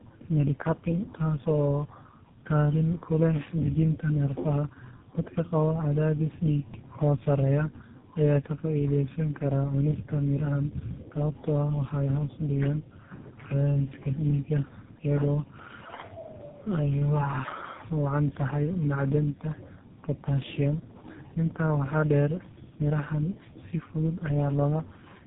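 Across the whole recording the speech sounds rough, muffled and warbly, with nothing above about 3.7 kHz. That is tandem speech coding: the call appears to have been decoded and re-encoded at each network border, passing through roughly three low-rate speech codecs in a row, ending with one that fits GSM full rate. Each coder re-quantised the previous coder's artefacts, so the roughness and smearing build up beyond what any single link would produce.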